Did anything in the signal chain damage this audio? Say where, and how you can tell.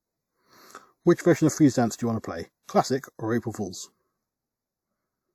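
Yes. The speech sounds hollow and phasey from start to finish, with a fixed notch around 3 kHz. This is channel delay (comb filtering): one channel ran a fraction of a millisecond late, and summing to mono cancelled shared content at evenly spaced frequencies.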